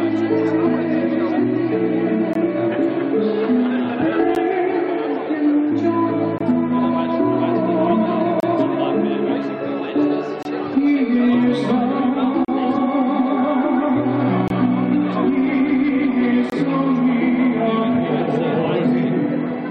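Gaps between stream segments occur at 2.33, 4.35, 6.38, 8.40, 10.43, 12.45, 14.48 and 16.50 s. Segment timestamps fail to meet, so the player inserts silence. Each hard-edged hole lasts 12 to 34 ms. The two-second spacing fits 2-second segments.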